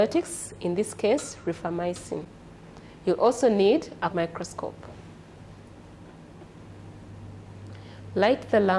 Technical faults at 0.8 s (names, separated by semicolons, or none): none